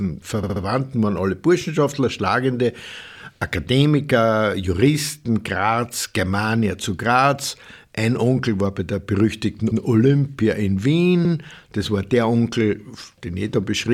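From 0.43 to 0.62 s, just before "waren alle", repeated frames make the speech stutter. The same 64 ms block plays three extra times, which fits two compressed frames being resent, and adds 192 ms. A 96 ms block then plays twice at 9.71–9.81 s, after "war bei der berüchtigten", and again at 11.25–11.34 s. The waveform shows identical segments side by side, and the spectrogram shows the same pattern copied back to back.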